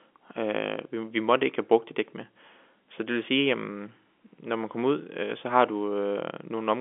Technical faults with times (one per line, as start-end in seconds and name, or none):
none